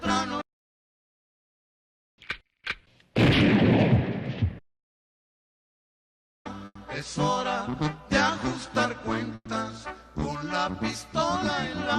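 Two call audio freezes, at 6.65 to 6.77 s and 9.35 to 9.48 s. The last sound smears into a fading buzz, then drops out for 30 to 40 ms. Audio resumes where it stopped, about 0.1 s later. Delayed packets likely drained the jitter buffer.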